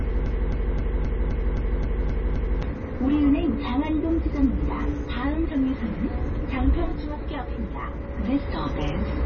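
From the start until 2.63 s, this recording of sounds is stuck in a broken-record loop: a 0.26 s fragment repeats exactly, back to back, about nine times, without the decay of an echo, likely from a stalled stream. Throughout, heavy MP3 compression is the likely cause of nothing above 6.6 kHz and a watery, swirling texture that sets it apart from a simple low-pass filter, consistent with roughly 24 kbps.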